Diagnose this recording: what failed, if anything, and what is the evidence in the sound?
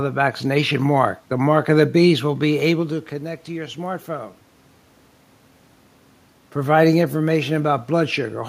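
Nothing failed in this recording, and nothing in the sound points to a fault.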